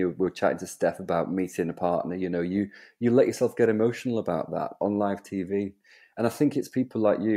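Listening to the speech recording, nothing stood out as a technical fault at any point.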